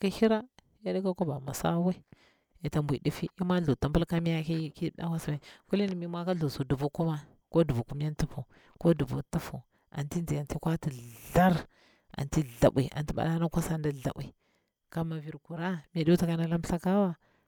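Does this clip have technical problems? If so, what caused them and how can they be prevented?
No, this speech recording has no technical faults, so there is nothing to trace or prevent.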